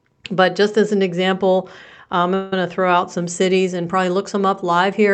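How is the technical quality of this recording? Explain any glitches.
The recording has one glitch, a call audio freeze. The audio came through a call codec, with the high end stopping around 8 kHz, which fits wideband Opus.

From 2.34 to 2.53 s, between "as an example I'm" and "to throw out some", packets were likely held up and the jitter buffer ran dry. The receiver stretched the last sound into a fading buzz for about 177 ms, and then the speech resumed, now running that much later, with nothing lost.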